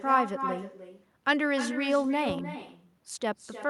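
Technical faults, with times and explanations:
Throughout, echo with no canceller: every phrase returns roughly a third of a second later as a quieter, thinner copy about 8 dB down, because the far end's loudspeaker feeds its microphone and nothing strips that signal before it travels back across the network.
2.29 to 2.43 s, loud pop: two sharp pops in quick succession, peaking around 5 dB above the speech, sit on top of the sound while it continues underneath. A sudden voltage step is the likely cause, with the following circuitry shaping each pulse into a short thump.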